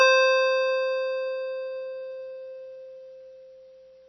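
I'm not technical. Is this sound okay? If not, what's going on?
No. MP3 compression damage runs through the whole piece of music, likely from squeezing it into a very small file. Everything above about 6 kHz is cut away, so it sounds dull, and heavy damage leaves a watery, swirling quality with smeared attacks.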